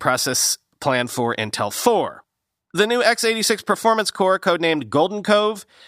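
No technical faults can be heard anywhere in the speech. There is nothing to place on the timeline.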